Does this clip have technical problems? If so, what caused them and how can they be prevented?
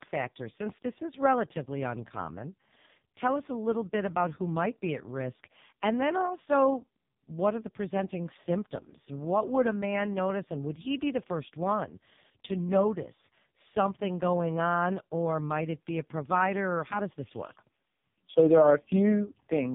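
Yes. AMR narrowband mobile codec damage runs through the whole speech clip. Nothing above about 3.8 kHz survives, so the sound is boxed in like a phone call. The speech is rebuilt from a small vocal-tract model excited by sparse pulses in each short sub-frame, and at this clip's heavy level of damage it comes out buzzy and synthetic, which fits AMR-NB's lowest mode of 4.75 kbps. To prevent it, record or transmit through a wideband or higher-bitrate codec rather than a narrowband mobile link.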